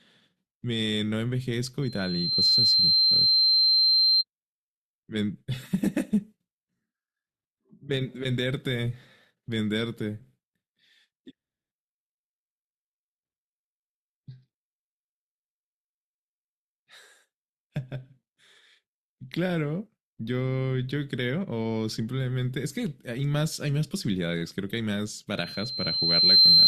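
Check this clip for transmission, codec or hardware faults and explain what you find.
Loudspeaker feedback squeal occurs twice in this speech, from 1.82 to 4.24 s and from 25.37 s to the end. The microphone is re-capturing its own loudspeaker, and around 4.1 kHz the loop gain tops one, so that tone feeds itself. It swells over under a second the first time and about a second the second, reaching roughly 10 dB and then 15 dB above the speech. A spectrogram shows a bright horizontal line at 4.1 kHz; the waveform's envelope balloons.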